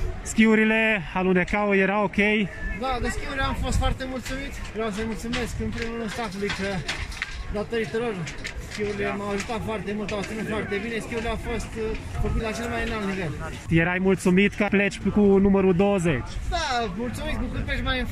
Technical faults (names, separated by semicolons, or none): none